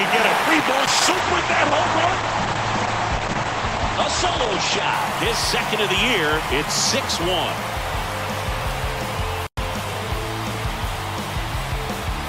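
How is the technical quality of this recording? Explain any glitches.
The recording has one glitch. A call bitrate drop runs from 0.53 to 4.99 s. The bandwidth estimate collapsed, and the encoder coded far more coarsely, which fits a fall from about 96 kbps to near 10 kbps. The audio band shrinks from 20 kHz to 8 kHz, and for about 4.4 s the sound turns rough, watery and muffled before recovering.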